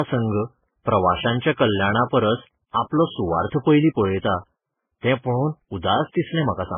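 Throughout, nothing sounds above 3.5 kHz, and two distinct artefact textures overlap rather than a single codec's one. This is likely transcoding between lossy codecs, fitting MP3 followed by Vorbis.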